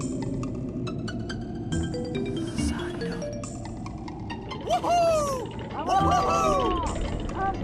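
No technical fault can be heard anywhere in this audio. There is nothing to point to at any moment, and no cause to trace.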